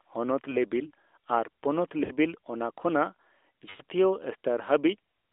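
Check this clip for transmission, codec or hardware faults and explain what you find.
The clip has one kind of fault, repeated three times: lost AMR speech frames, at 0.50–0.57 s, 2.04–2.11 s and 3.70–3.81 s. When a frame fails its check, the AMR-NB decoder carries the previous pitch and vocal tract settings forward at falling gain. The first gap is a short dip, consistent with a single 20 ms frame. The second and third stretch and fade the sound, fitting roughly three and five missing frames. Within the 300–3600 Hz band, the light codec coloration fits the 12.2 kbps mode.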